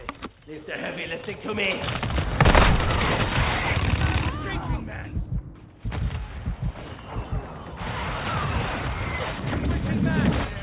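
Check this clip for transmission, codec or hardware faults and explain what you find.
Nothing wrong can be heard anywhere in this clip.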